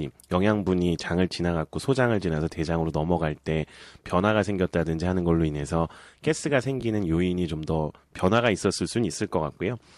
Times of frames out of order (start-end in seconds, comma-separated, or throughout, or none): 6.80-6.82